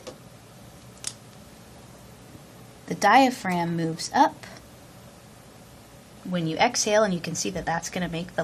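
From start to finish the sound is dull and muffled, with a gurgling, grainy roughness that shifts as the upper range flickers in and out. This plainly audible damage is likely MP2 compression at a low bitrate, consistent with around 80 kbps. MPEG Layer II divides the spectrum into 32 sub-bands and shares out a limited bit budget; starved of bits, it drops the highest bands entirely and quantises the rest coarsely, producing this granular, watery texture.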